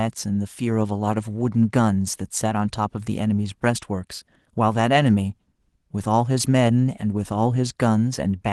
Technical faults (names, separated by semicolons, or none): none